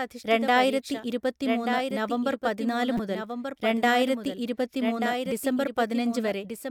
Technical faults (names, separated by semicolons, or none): doubled audio track; damaged data in a compressed stream